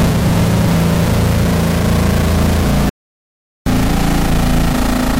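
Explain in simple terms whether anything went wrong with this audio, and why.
At 2.89 s the sound cuts to silence for about 0.77 s, resuming at 3.66 s: a playback stall, likely the player briefly running out of data.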